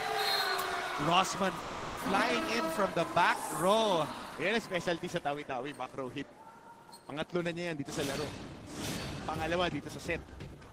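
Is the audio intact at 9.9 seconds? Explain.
No. At 9.9 seconds the audio is inside a jitter buffer speed-up running from 7.71 to 10.68 seconds. The receiver trims short pitch-period slices to drain excess buffered delay. Playback runs at 110 percent with pitch unchanged, so it sounds hurried. Roughly 300 ms is removed.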